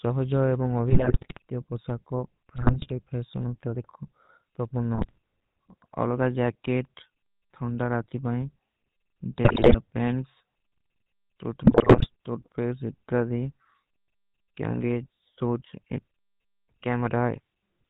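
GSM full-rate codec damage runs through the whole of this speech recording: the voice has a buzzy, gravelly roughness and no content above 4 kHz, which fits 13 kbps GSM coding that rebuilds speech from a vocal-tract filter driven by sparse, regularly spaced pulses. GSM bit errors break the voice into squawks, pops and gargling at 0.90–1.42 s, 2.56–2.88 s, 4.95–5.18 s (just after "ଦେଖୋ ତୋ"), 9.44–9.79 s and 11.64–12.07 s. In these bursts, corrupted filter, pitch and gain values reach the decoder, bending the spectrum and making the level jump frame by frame.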